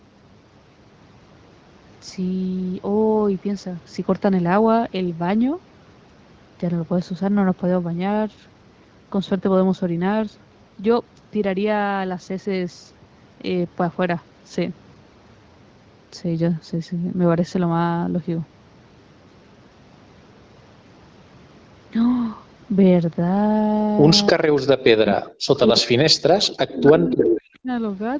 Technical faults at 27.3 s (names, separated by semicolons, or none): speech suppressed in double talk; echo leak